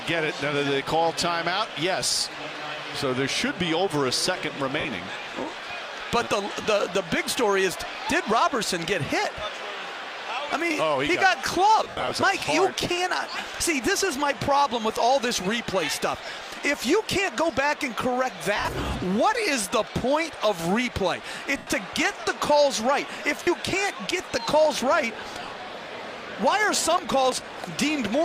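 Lost LE Audio frames at 4.80, 6.62, 11.83 to 12.11, 14.38, 18.56 to 18.68, 21.57 and 23.43 s: the decoder repeats the last spectrum with scrambled phase, so the sound becomes a brief noisy smear. On a spectrogram, harmonics blur into flat noise bands, and the waveform dips as the concealment fades.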